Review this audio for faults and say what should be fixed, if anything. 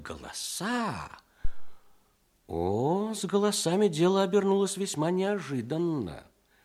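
Phantom power toggled on a live input at 1.45 s stepped through the coupling capacitors, causing a phantom power thump: a deep thud peaking at about -15 dBFS, decaying within 89 ms and gone by 1.85 s. To prevent it, mute the channel before toggling phantom power and unmute only after the supply has settled.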